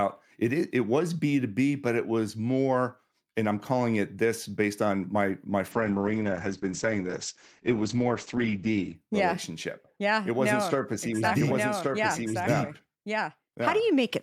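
From 5.73 to 9.01 s a call bitrate drop makes the speech coarse and watery. The spectrogram's top is sliced flat at 8 kHz, which points to roughly 64 falling to 9 kbps. From 11.24 s to the end, a doubled audio track adds a second copy at about the same level, roughly a second late, likely from a second capture path. It shows as the waveform's envelope repeating, abruptly and without decay.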